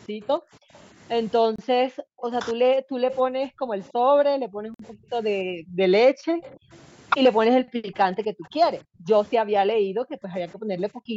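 From 0.08 to 6.72 s the speech is suppressed in double talk. The level dips repeatedly, at worst by something like 40 dB, across roughly five seconds of that span. This is likely the echo canceller failing to tell the near talker from loudspeaker echo while the far side was also speaking, so it attenuated everything. The same behaviour returns from 7.50 to 11.16 s, affecting around three seconds, again with drops near 40 dB.

Within the first stretch, at 0.75 to 0.82 s, a faint echo leak appears: a delayed copy of the speech arriving 286 ms late at about 35 dB below it. It is likely residual loudspeaker pickup that the canceller did not fully remove and sent back. Further leaks follow at 3.11 to 3.17 s (about -15 dB), 3.83 to 3.93 s (about -35 dB), 6.42 to 6.76 s (about -25 dB, the longest scrap) and 8.43 to 8.48 s (about -35 dB), all with the same 286 ms delay.

At 1.56 s the audio cuts to silence for 27 ms, and at 4.74 s for 52 ms, then resumes. 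These gaps are a Bluetooth stall, likely caused by interference delaying packets until the headphone buffer ran empty. The band stops at 8 kHz, consistent with the call microphone processing.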